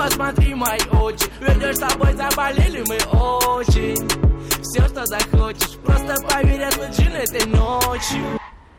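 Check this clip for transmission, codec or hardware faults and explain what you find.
Nothing turned up here: there's no dropout, glitch or other transmission, codec or hardware trouble to point to anywhere in the clip.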